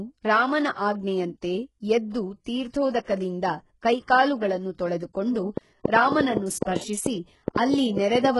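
Speech, with heavy codec damage throughout: the treble sounds gritty and synthetic, s sounds turn metallic or lispy, and nothing remains above 11.5 kHz, most likely from HE-AAC compression at a very low bitrate around 12 kbps. On a spectrogram the top band shows a hard ceiling and copied, blocky harmonic patterns that fail to line up with those below. Pre-echo appears twice, spanning 3.03 to 3.07 s (39 ms) and 6.63 to 6.67 s (36 ms). A short hiss runs ahead of a sharp attack, which sounds softened, because the codec spread noise over a whole block, including the quiet moment before the onset. This shows as a vertical smear just before the transient. From 5.57 to 8.26 s comes a train of clicks: around fifteen similar pops at an irregular pace of about five per second, standing roughly 15 dB above the signal, audible in pauses too. They likely come from a source such as interference from nearby equipment or a faulty connection or power supply. 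They appear as narrow spikes in the waveform and thin full-height vertical lines on the spectrogram.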